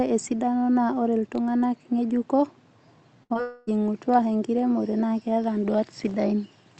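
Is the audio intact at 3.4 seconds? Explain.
No. The stretch around 3.4 s is broken by three closely spaced packet-loss faults.

From 3.23 to 3.32 s there is a burst of packet loss. About 60 ms of audio never arrived in time, and the receiver stretched the preceding sound across the gap, fading it as it went. This is heard as a brief held buzz or hiss, and the speech picks up slightly further on, with that short piece missing.

Right after, from 3.34 to 3.37 s, comes a short concealed packet loss of about 20 ms. The decoder synthesised a replacement from the last pitch or noise shape and blended it back into the real signal. The result is a quick smear or wobble, and a brief consonant in that spot can disappear.

Then, from 3.41 to 3.69 s, the sound turns into a continuous synthetic buzz or hiss that decays over roughly a quarter of a second, with no true silence. The speech resumes afterwards minus the lost portion. 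This is likely a long network dropout, where about 260 ms of packets failed to reach the receiver and concealment filled the entire gap.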